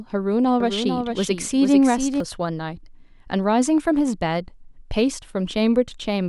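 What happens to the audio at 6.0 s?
Nothing goes wrong at 6.0 s; the speech there plays through cleanly, with no dropout, click or distortion.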